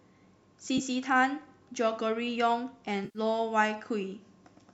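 At 0.78 to 0.81 s there is a brief smeared, noisy blur. From 3.05 to 3.19 s a longer hollow, phasey stretch sags and then recovers. Both are AAC frame loss with concealment: the decoder patched the missing frames from the last good spectrum, and the short frames involved fit likely low-delay AAC.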